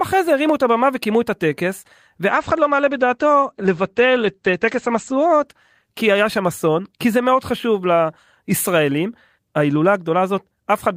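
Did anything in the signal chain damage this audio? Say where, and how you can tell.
Yes. The damage is a call bitrate drop, in the network and codec stages. From 2.31 s to 6.81 s the speech turns coarse and muffled. The top end is cut off at about 8 kHz, down from a full band reaching 20 kHz. The worst stretch lasts about 2.7 s. The sound points to a fall in the encoder's rate, which fits a drop from 32 kbps to 14 kbps. The bandwidth estimate fell, so the codec coded more coarsely and discarded the highs until the rate recovered.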